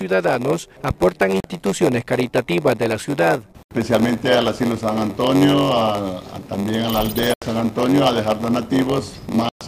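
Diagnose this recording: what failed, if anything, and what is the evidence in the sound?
A block size mismatch (padded) sits at the driver or buffer stage. A steady buzz near 93.8 Hz runs through the whole clip. The audio plays at 0.938 times normal speed, timbre unchanged. That fits 480-sample blocks zero-padded to 512.

Four silent holes mark the wireless link: 1.40 to 1.45 s, 3.63 to 3.71 s, 7.34 to 7.42 s, and 9.49 to 9.61 s. The sound resumes further along each time. The likely cause is Bluetooth dropout, losing about 37 to 112 ms per event.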